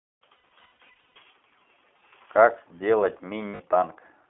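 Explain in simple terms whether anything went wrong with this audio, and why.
Two things went wrong. First, the whole clip passed through the iLBC codec, a phone-quality voice compressor built for internet calls. It keeps only a narrow telephone band, roughly 250 Hz to 3.4 kHz, so the speech sounds thin and boxy, and its compression leaves the voice plainly rough and slightly synthetic. It works on short fixed chunks of sound, and here the behaviour fits 20 ms chunks.

Second, there are lost iLBC frames, meaning pieces of the audio never arrived. Between 0.40 and 1.17 s, much of the sound drops out in scattered bursts, the longest about 150 ms. At 3.48 to 3.61 s there is one shorter gap of about 120 ms. In each gap the decoder fills in by repeating the last bit of voice with added noise, which comes out as a held, buzzy vowel. Each chunk decodes independently, so the voice recovers almost immediately afterwards.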